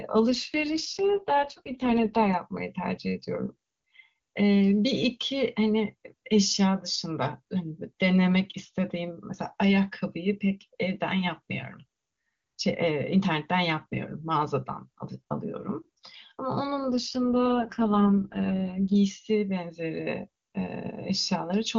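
A speech clip on an HD Voice call turns rough and synthetic from 0.30 to 2.34 s and again from 16.66 to 18.95 s. This is an AMR rate drop: the sound points to the codec falling to its lowest wideband rate, near 6.6 kbit/s, from its clear top rate. Unlike a switch to narrowband or packet loss, the bandwidth holds and nothing goes silent.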